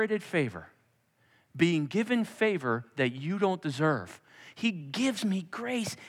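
From 4.81 s to the end, speech runs 5.25% fast and 89 cents sharp, likely a drift correction step that abruptly changed the playback rate to rebalance a buffer.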